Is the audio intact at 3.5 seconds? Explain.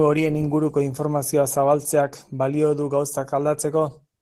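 No. At 3.5 seconds the speech carries Opus voice compression, which runs through the whole clip. The sound points to hybrid coding at a rate around 16 kbps in 20 ms frames: a linear-prediction layer handles the band below 8 kHz, and a thin transform layer covers the top. With so few bits, the excitation is coarsely quantised, so the voice is plainly muffled, hoarse and faintly robotic.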